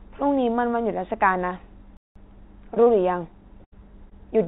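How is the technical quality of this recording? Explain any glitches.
The recording has four dropouts in the call audio and one stretch where playback halts. The band stops at 4 kHz, which points to narrowband G.711 mu-law at 64 kbps on the call path.

Playback stall, 1.97 to 2.16 s: the sound stops mid-flow and the output goes fully silent for about 0.19 s before continuing. The likely cause is the player running short of data or its thread being blocked, so nothing is output until it recovers. What separates this from packet loss is the dead silence. No trace of the previous sound is carried into the gap, and nothing fades.

Short concealed packet loss, at 2.75 to 2.78 s, 2.84 to 2.88 s and 4.10 to 4.13 s: each time, about 20 ms of audio failed to reach the decoder in time. The receiver covered the hole by extending the preceding sound, using its pitch if voiced or shaped noise if not, then crossfaded back into the real signal. 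Each one is heard as a quick smear or wobble rather than a gap, and a short consonant can disappear inside it. The first two are close together.

Burst of packet loss, 3.64 to 3.74 s: about 80 ms went missing in one run, which is too long for a seamless patch. Concealment continues the last sound and turns it down as the gap goes on, so a voiced sound becomes a held buzz that fades, or an unvoiced one becomes a dying hiss. The audio then resumes further along with the lost section skipped. This differs from the short losses in length and in the audible fade. It differs from the stall because the gap is filled rather than silent.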